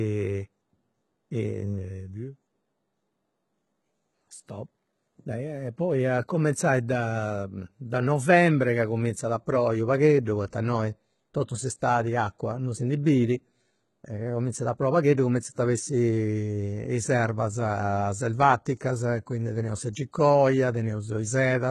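From the start, the speech carries heavy codec damage and nothing above 11.8 kHz. The top band sounds copied upward rather than captured, so s sounds turn gritty or metallic. This is likely HE-AAC compression, at a rate that points to about 16 kbps.

From 0.26 s to 21.66 s, clock slip clicks run as steady ticks about every 0.2 s, roughly a hundred in all. Each is likely one dropped or repeated sample from unmatched clocks drifting apart by about 100 ppm.

At 10.25 s, pre-echo smears an attack. Codec noise sized for the loud onset spreads 17 ms into the quiet just before it, so a short hiss leads in. It happens again at 19.93 s, spreading 18 ms.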